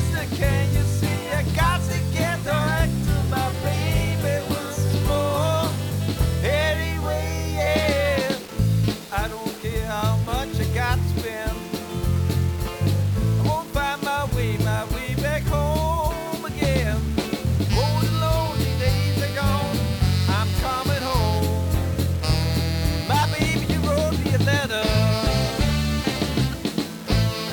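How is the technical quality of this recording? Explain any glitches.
Technical quality is poor, with one fault running the whole way through. It's low bit depth without dither: the sound has grainy, gritty distortion that tracks the signal, sitting roughly 20 dB down, and quiet passages sputter or drop out. That likely comes from rounding to about 5 bits with no dither, so the error locks to the waveform.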